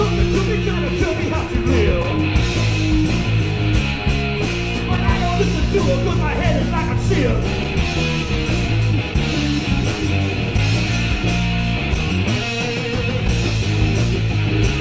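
Nothing goes wrong anywhere in this clip, so there's no technical fault to point out.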